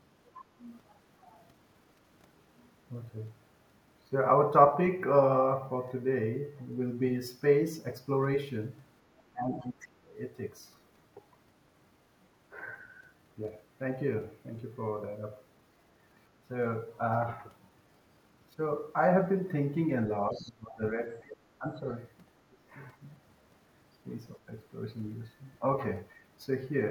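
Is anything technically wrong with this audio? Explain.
Yes. The echo canceller likely failed to remove the far end's loudspeaker sound from the microphone, so the other side's voice leaks through: a faint second voice about 20 dB below the speech at 0.36–0.42 s, and about 25 dB below at 20.34–20.52 s.

When both sides talked at once, the echo canceller likely could not separate the talker from the echo and turned both down, suppressing speech in double talk. The voice dips by about 20 dB at 9.32–9.88 s, 20.28–21.84 s and 22.49–22.57 s, and by about 15 dB at 22.98–23.02 s.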